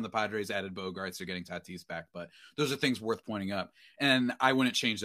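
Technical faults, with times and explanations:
No technical faults are present in this clip.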